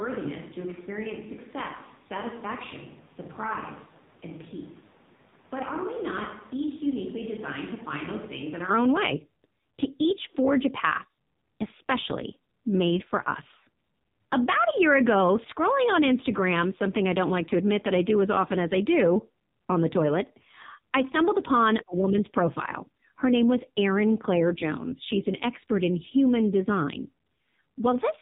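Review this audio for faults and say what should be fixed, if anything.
Across the whole recording the speech carries the sound of the AMR narrowband mobile codec: nothing passes above 4 kHz, and the voice is buzzy and synthetic, with heavy damage that points to a low mode of about 5.9 kbps. The codec rebuilds speech from a vocal-tract model excited by a few pulses per 5 ms subframe, so detail is lost. A spectrogram shows a hard ceiling at 4 kHz and smeared, blocky harmonics. Prevent it by recording or transferring over a wideband path rather than a 2G/3G voice channel.

From the start of the clip until 8.71 s, just before "own way", the speech sounds roomy, hollow and thin in the bass. This is likely a switch to a distant microphone after the close microphone's signal was lost or left out. The level sits about 10 dB lower, and room noise rises to roughly 25 dB below the speech. The waveform is visibly smaller until 8.71 s and then jumps up, and the spectrogram shows a raised noise floor and weaker low end before that point. 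Prevent it by monitoring the close microphone's feed during recording and checking that it is selected in the edit.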